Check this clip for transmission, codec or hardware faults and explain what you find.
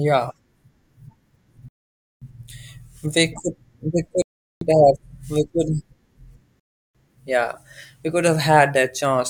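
The speech has three rebuffering stalls: 1.68 to 2.22 s (0.53 s added), 4.22 to 4.61 s (0.39 s), and 6.60 to 6.95 s (0.35 s), the last ending just before "yeah we could". Each time, playback outran the downloaded data and paused until more arrived, so the sound drops to silence and picks up exactly where it stopped. Unlike a dropout or packet loss, no speech is skipped. The gaps only stretch the timeline.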